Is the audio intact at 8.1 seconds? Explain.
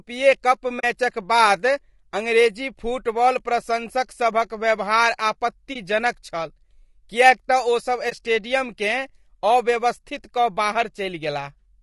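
No. From 8.09 to 8.13 s, just after "तँ ओसभ", there is an AAC frame loss with muting. The decoder had no data for a stretch of about 20 ms, which points to a single lost frame, and it filled the gap with silence. Because AAC frames overlap, the sound fades out and back in rather than stopping abruptly, so it is heard as a brief soft dropout. On a waveform the envelope tapers to near zero and recovers. On a spectrogram a thin vertical blank strip cuts across all frequencies.

Around that moment, and across the whole clip, the speech is also rough and grainy. This is likely low-delay AAC compression at 32 kbps, such as the AAC-ELD codec used for video calls. Its short analysis frames separate pitch harmonics poorly, and at this bitrate noise fills the gaps between them. On a spectrogram the harmonic lines look smeared, with a grainy haze between them and a sparse, patchy upper band.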